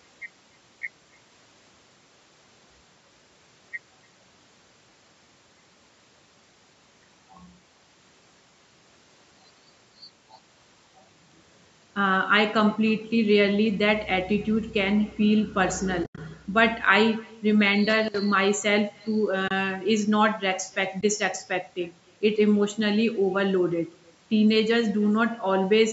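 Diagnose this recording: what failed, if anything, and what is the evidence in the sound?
Echo with no canceller, at the call-processing stage: the far end's loudspeaker bleeds back into its mic, so the speech is shadowed by a quieter copy (about 28 dB down) roughly 300 ms later.

AAC frame loss with muting, on the network side: soft fade-outs at 16.04–16.18 s (120 ms lost over 140 ms), at 19.48–19.51 s (30 ms), and at 21.01–21.03 s (20 ms). The decoder zeroed the lost frames, and the gap lengths fit 10 ms frames.

Loose connector crackle in the analogue wiring: an irregular scratchy burst from 17.90 to 18.19 s, where a worn contact was making and breaking the signal.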